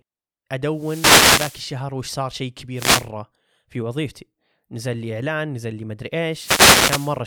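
Three wireless microphone noise hits interrupt the speech: from 0.71 to 1.75 s, a brief one from 2.74 to 3.08 s, and from 6.30 to 7.20 s. Each time the FM radio link fades as reflected paths cancel, so the receiver's own noise swells into a swish of static. Unlike a digital dropout, which cuts to silence, or steady background hiss, this noise rises and falls with each fade.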